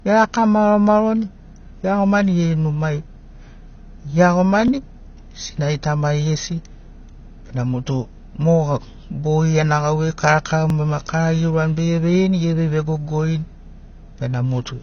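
Speech, band-limited throughout with nothing above about 6.6 kHz, a dull, smeared quality and audible warble on sibilants. This is likely AAC compression at a low bitrate, consistent with AAC-LC around 24 kbps, where the encoder drops the upper band and coarsely quantises what remains. Two overlapping chunks produce a brief stutter at 4.68 s and again at 10.70 s, each replaying about 23 ms of audio. The 6.0 s spacing points to fixed-length processing blocks whose boundaries overlap rather than abut, so a short segment repeats at each join.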